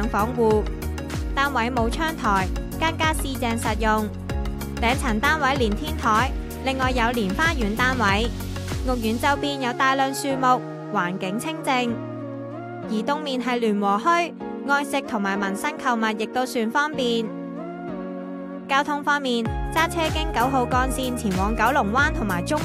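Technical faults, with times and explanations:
0.56 to 22.52 s: clock slip clicks, faint ticks roughly every half second, likely two unsynced clocks drifting around 50 ppm apart, each slip dropping or repeating one sample.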